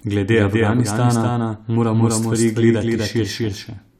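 From start to finish, the speech carries a doubled audio track. A second full-band copy trails about 300 ms behind, at roughly the same level. It has no decay or room colour. This likely comes from the sound being captured twice through a slower second path.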